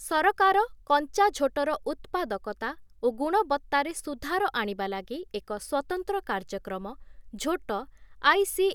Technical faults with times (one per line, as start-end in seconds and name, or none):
none